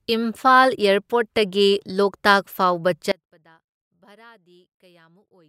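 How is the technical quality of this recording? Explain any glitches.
The recording has one clear fault: the speech drops out at 3.12 s and never returns. This is an audio dropout to a faint residue, lasting to the end of the clip. The wanted signal was likely lost upstream while the path after the break stayed live, leaving only faint sound roughly 30 dB below normal level. A natural pause or fade would ease down gradually. This cut is abrupt, and a hard mute would leave true silence rather than that residue.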